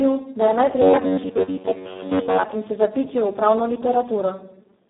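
Throughout, the Speex codec is working at very low quality, which fits roughly 4 kbps. The speech sounds hoarse and noisy, confined to 200 Hz to 3.7 kHz.

From 0.82 to 2.46 s comes a robotic sound. It is likely from repeated short buffers. Most of the sound is replaced by loops, giving a rigid 93.8 Hz metallic buzz.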